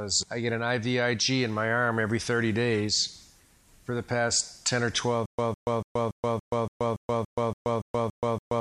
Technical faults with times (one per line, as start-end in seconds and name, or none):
5.26-8.60 stutter with silent gaps